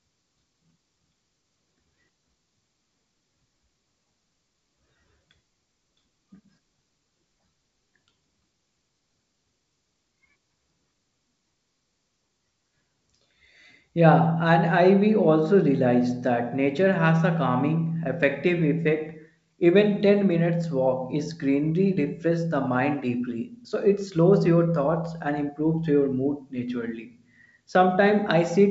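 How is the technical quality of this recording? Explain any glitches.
The technical quality is good, and there are no glitches to explain.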